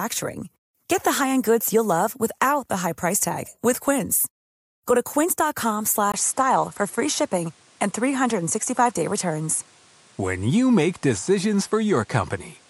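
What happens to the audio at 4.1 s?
Nothing goes wrong at 4.1 s; the speech runs on intact through that moment, with no dropout, click or distortion.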